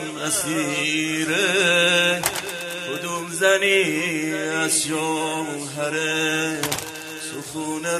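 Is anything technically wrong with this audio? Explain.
No, nothing technically wrong can be heard in this audio.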